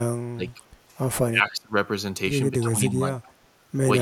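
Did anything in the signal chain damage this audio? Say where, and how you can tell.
Yes. The damage sits in call processing. The talker's speech is pulled down three times, from 0.32 to 0.6 s, 1.31 to 1.76 s and 2.61 to 3.28 s. The first two dips reach roughly 25 dB, the third roughly 10 dB. The level sags and recovers in pieces rather than cleanly. This is speech suppressed in double talk. The likely cause is an echo canceller that heard both sides at once and attenuated everything.

There is also an echo leak at the same stage, from 3.17 to 3.31 s. A faint delayed copy of the speech surfaces about 280 ms behind the original. It sits roughly 25 dB below the speech and lasts only a short scrap. This points to a loudspeaker on one side of the call. Its echo canceller likely failed to remove all of the pickup, so a residue travelled back down the line.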